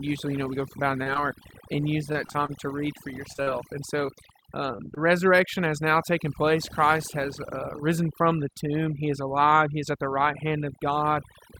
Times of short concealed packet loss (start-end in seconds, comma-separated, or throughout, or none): 1.03-1.22, 4.76-4.98